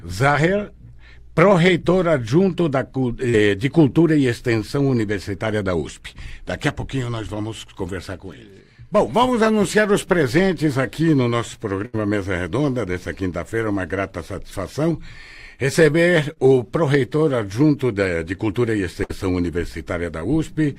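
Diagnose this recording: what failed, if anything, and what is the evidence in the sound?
The network stage failed. At 3.29 s, 16.33 s and 20.19 s there is short concealed packet loss of about 40, 20 and 20 ms. The receiver carried the preceding sound across each hole and blended back, so each gap is only a brief smear or wobble, not a dropout to silence.

Also at the network stage, the gaps at 11.86 s and 19.04 s are bursts of packet loss, with about 80 and 60 ms missing. There the concealment holds and fades as a buzz or hiss, and the audio resumes further on with material skipped.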